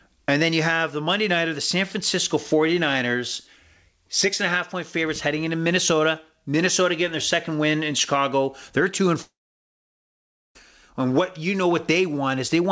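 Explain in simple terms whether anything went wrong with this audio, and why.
Something did go wrong, once. From 9.22 s to 10.57 s the speech cuts out. The last sound trails off into a brief fading buzz, then about 1.2 seconds of near silence. When the voice returns, about 1.3 seconds of speech is simply gone. That is most likely a long network dropout: the call stopped receiving audio and could only stretch the final sound briefly. A short packet-loss glitch would be a quick blip, not a lasting gap.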